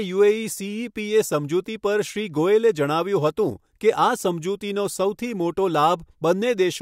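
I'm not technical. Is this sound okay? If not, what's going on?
Yes, this recording of speech sounds fine. Nothing in it went wrong, so there's nothing you need to fix.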